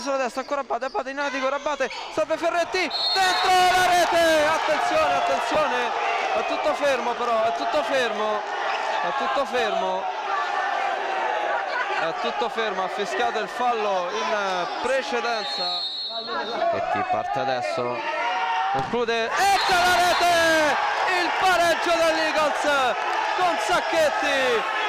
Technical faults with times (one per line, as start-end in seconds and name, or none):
5.55 lost LE Audio frames